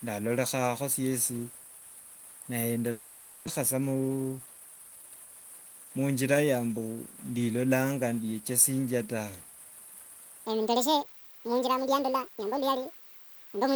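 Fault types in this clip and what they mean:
Long network dropout: From 2.91 to 3.49 s the sound turns into a fading, buzzy continuation of what came just before. This is most likely a long network dropout, where packets stopped arriving. The receiver filled the whole 560 ms gap with synthetic concealment rather than silence. When the speech resumes, about 400 ms of real audio is gone, and the stream has picked up around 150 ms of extra delay.
Jitter buffer speed-up: Right after the dropout, from 3.61 to 4.85 s, the speech runs at about 110% speed while its pitch stays unchanged, so it sounds hurried. After the delay built up, the jitter buffer held more audio than its target. The receiver drained the surplus by repeatedly cutting out short pitch-period-sized slices, removing roughly 150 ms in total.
Section at the wrong speed: From 10.46 s to the end at 13.76 s, the speech plays 1.87 times too fast. 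Because speed and pitch rise together, the voice jumps up by roughly ten semitones and sounds high and rushed. The likely cause is that this final section was played back or rendered against the wrong clock rate, which shifts timing and pitch by the same factor.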